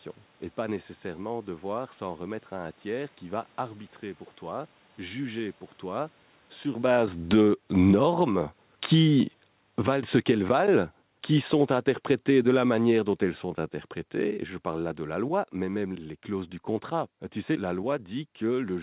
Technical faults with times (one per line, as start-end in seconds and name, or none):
6.70-13.59 automatic gain falling
7.41-9.40 automatic gain rising
10.07-11.02 automatic gain rising
14.17-16.00 automatic gain falling